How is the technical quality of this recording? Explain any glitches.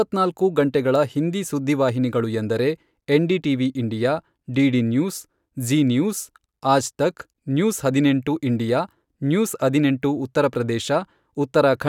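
The recording has no audible technical glitches: the signal stays continuous and stable for its whole duration.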